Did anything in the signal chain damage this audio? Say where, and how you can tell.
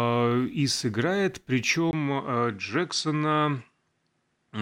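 Yes. Right after "и сыграет" at 1.91 s there's a 20 ms gap, then the speech loses everything above 10.7 kHz and picks up a new, low noise floor, likely an input switched to a poorer device.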